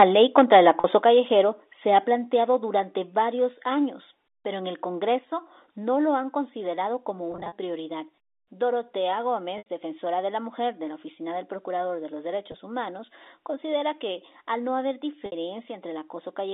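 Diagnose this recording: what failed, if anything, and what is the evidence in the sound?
Converter stage: microphone overload from 0 to 0.95 s, with peaks about 4 dB over full scale. A small fraction of samples have flattened tops, giving a harsh crackle, likely from excessive input gain.

Call processing: microphone volume stepped down in sudden level drops at 0.03 s (about 2 dB), 1.02 s (about 5 dB), 2.04 s (about 3 dB), 3.06 s (about 1 dB), 5.16 s (about 2 dB) and 6.18 s (about 1 dB). This is likely automatic gain control reacting to the clipping.

Network: packet loss with pitch repetition at 0.80 s (40 ms), 7.32 to 7.52 s (120 ms scattered), 9.58 s (80 ms), 12.52 s (20 ms) and 15.26 s (60 ms). The receiver repeats the last pitch period, giving a held, buzzy tone that fades.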